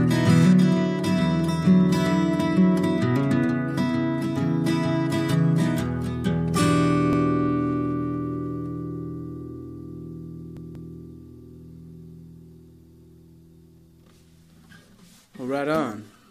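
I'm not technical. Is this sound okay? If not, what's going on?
No. The audio has repeated frames: a small chunk of the compressed recording got stored or sent more than once, so the player plays it again. At 7.13 s, a slice of about 0.09 s repeats once, heard as a quick stutter. At 10.57 s, a longer slice of about 0.19 s, which fits two frames, plays two extra times, making a longer stammer. Together the repeats make the recording about half a second longer than it should be.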